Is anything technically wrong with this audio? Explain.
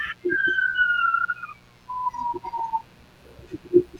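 Yes, there is one fault. Mains buzz runs throughout: switching spikes on 60 Hz power leak in twice per cycle, adding a steady, raspy buzz roughly 35 dB under the speech.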